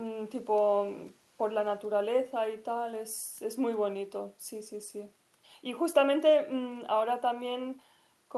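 No technical faults can be heard anywhere in the speech recording, and the signal stays intact and stable throughout.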